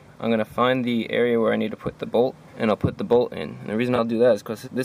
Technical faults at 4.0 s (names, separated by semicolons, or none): corrupt frame concealed